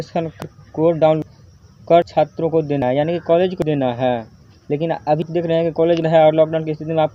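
At 0.42, 1.22, 2.02, 2.82, 3.62, 4.42, 5.22 and 6.02 s the sound skips forward with no silent gap, unlike a dropout. This is likely audio missing between chunks, with about a fifth of a second lost at each 1-second chunk boundary.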